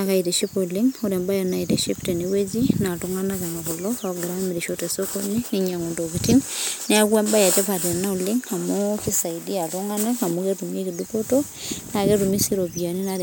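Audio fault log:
Nothing stood out on listening to this speech recording.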